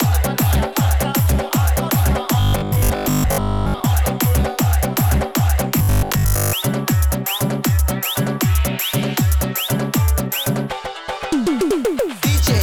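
From 2.4 to 3.84 s and again from 5.79 to 6.55 s, the sound turns into a rigid, metallic buzz pitched at 50 Hz. This robotic sound most likely comes from repeated short buffers: new audio arrived too slowly, so a 20 ms stretch kept replaying while the real audio was skipped. Most of each segment consists of these repeats, which impose the fixed 50 Hz pitch.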